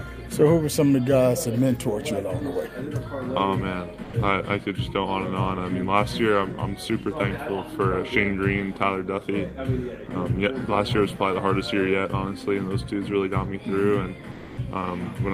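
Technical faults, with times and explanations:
4.03 to 4.13 s, sound dropped by the voice detector: for 100 ms the sound itself disappears and a steady noise bed takes its place, then the sound resumes. The likely cause is a discontinuous-transmission scheme, consistent with Opus DTX, whose detector misjudged this moment as background and stopped sending. Unlike comfort noise standing in for a real pause, here wanted sound is lost, so the gap cuts into the material.
14.31 to 14.57 s, comfort noise in place of the background: for 260 ms the background, sitting about 20 dB below the loudest passages, turns into a smooth, featureless hiss. The level stays the same, but its natural detail and movement vanish. This likely comes from the sender pausing transmission, as Opus DTX does, with the receiver synthesising matching noise. No foreground sound is cut, which separates it from the dropout at 4.03 s.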